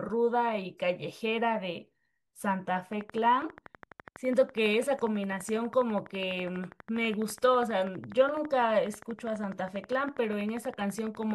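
Likely interference or a faulty connection injects pulses from 2.93 s to 11.32 s: a train of clicks, regular at 12.2 per second, ticking over the speech and pauses, peaking a few dB louder.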